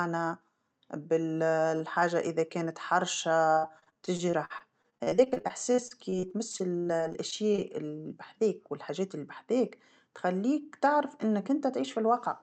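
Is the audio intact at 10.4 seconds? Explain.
No. From 9.60 to 10.52 s there's a jitter buffer speed-up: the receiver trimmed around 70 ms by dropping short pitch-period chunks in quick succession, so the speech runs about 7% faster at unchanged pitch and comes across hurried.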